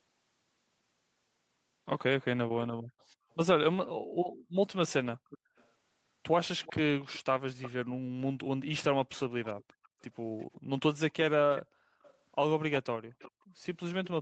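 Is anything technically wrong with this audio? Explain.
Yes. In two kinds of fault, one side of the call is on a loudspeaker and its echo canceller leaks and gates.

Echo leak: The canceller likely let part of the loudspeaker signal through, and that part was sent back. A faint delayed copy of the speech follows the talker. At 3.31 to 3.36 s it is a very quiet scrap about 395 ms late. From 4.88 to 7.71 s and from 9.26 s to the end, it trails by about 360 ms at roughly 20 dB below the speech.

Background gated by the echo canceller: While the far end was playing, the canceller clamped the microphone down hard. Between 7.85 and 9.99 s and again between 11.63 and 13.47 s, the room sound drops by up to about 38 and 36 dB. Together these dips last roughly half a second in each stretch before the background returns. Through all of this the speech stays band-limited to 8 kHz by the Opus call path.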